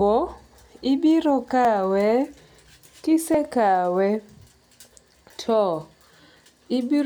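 At 1.65 s and again at 3.34 s the speech jumps abruptly, each time with a small forward skip where a fragment of roughly 20 ms is missing and the surrounding audio is butted together without any gap. This is likely a dropped buffer (overrun), where the capture side failed to read a block of samples before the hardware overwrote it, so that block was lost.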